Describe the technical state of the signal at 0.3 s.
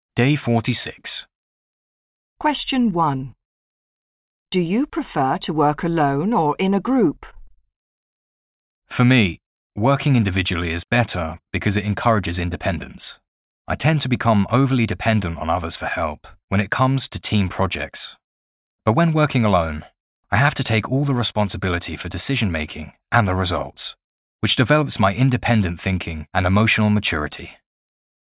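At 0.3 s the signal is intact, with no audible fault at that moment.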